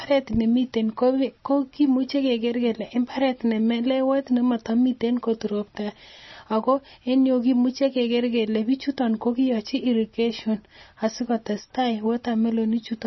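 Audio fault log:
Throughout, MP3 compression: the speech has nothing above 5.9 kHz and a heavy watery, swirling texture, likely from an encoder starved of bits, which fits a bitrate near 24 kbps. It cut the treble and zeroed weak frequency lines that flicker between frames.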